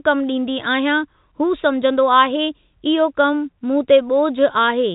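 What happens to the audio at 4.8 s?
Nothing goes wrong at 4.8 s: the speech carries on intact through that moment, still with the narrow telephone band of G.711 coding, which stops at about 3.8 kHz.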